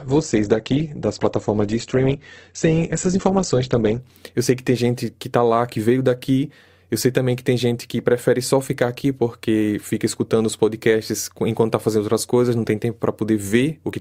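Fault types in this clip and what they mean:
Adaptive stream starting at a low bitrate: the player began this speech on a lean version of the stream to start quickly, then switched up once it had gauged the connection. Until 4.0 s nothing sits above 8.2 kHz and codec smearing is heavier, which fits Opus near 12 kbit/s. The fuller stream, consistent with 64 kbit/s, then takes over with no gap. A spectrogram shows an empty top band ending at a sharp vertical edge. The waveform stays continuous.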